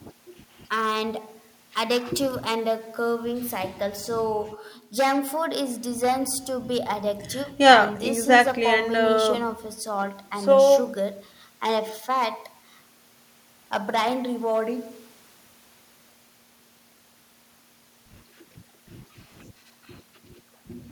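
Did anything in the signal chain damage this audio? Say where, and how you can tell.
Yes: hard clipping across the whole speech recording, pointing to a stage driven about 11 dB past its ceiling, most plausibly the converter input. Around one percent of samples hit the limit and flatten, adding harsh upper harmonics on loud syllables. Unlike soft saturation, the edges are abrupt.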